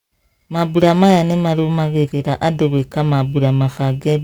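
The speech carries periodic clock jitter throughout. The converter's sampling clock is being shaken at a single rate of around 3 kHz, so each component of the sound gains sidebands spaced that far above and below it, strongest on the higher frequencies. The result is a rough, metallic edge that disappears in the pauses.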